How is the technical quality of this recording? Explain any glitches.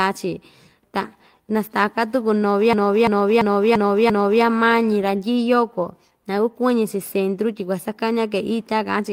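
The recording has one clear glitch. From 2.73 to 4.44 s, a single 341 ms fragment repeats five times, a stutter pulsing at about 2.9 per second. This is a system hang loop: the system stalled while the audio hardware kept replaying its ring buffer, which fits a 16384-sample buffer.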